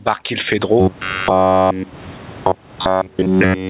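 Gain pumping is present throughout: the room noise swells in pauses and ducks by roughly 20 dB under loud passages, likely from excessive input gain driving a fast limiter. From 0.80 s to the end, robotic sound from repeated short buffers sets in, a rigid metallic buzz near 94 Hz. This is likely caused by starved playback repeating a buffer of about 10.7 ms.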